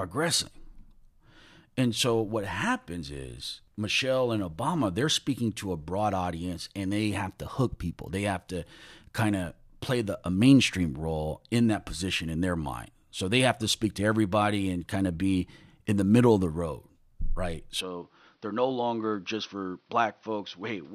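At 17.81 s the speech turns duller and about 5 dB quieter with no gap, losing everything above 6.1 kHz, likely an input switched to a poorer device.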